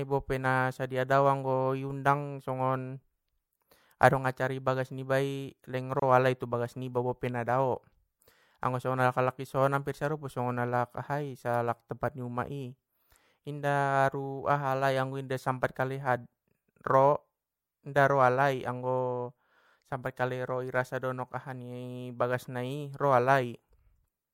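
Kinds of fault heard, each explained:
Gap at a join of encoded pieces: separately encoded pieces were joined with encoder delay and end padding kept, opening a 27 ms gap at 6.00–6.02 s between "bagas niba i leng" and "alai tu bagas nibai". A spectrogram shows a narrow blank column with smeared edges.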